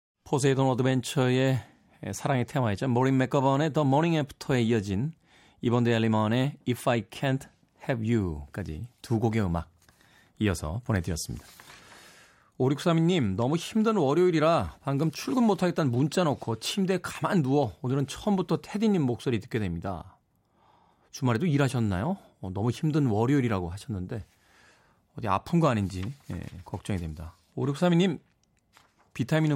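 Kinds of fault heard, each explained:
No faults turn up anywhere in this speech recording, so there's nothing to list here.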